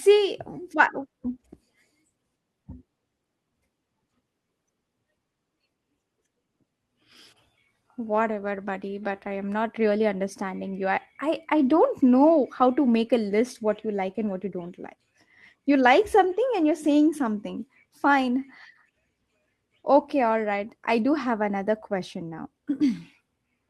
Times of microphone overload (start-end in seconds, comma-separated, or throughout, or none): none